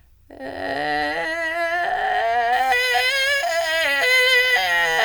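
A music clip where, from 2.53 s to the end, pre-emphasis is left on: the treble boost applied before transmission, consistent with the 50-microsecond FM curve, is never undone. The top end sits about 10 dB high at 10 kHz relative to 1 kHz, so the music turns thin, bright and sibilant.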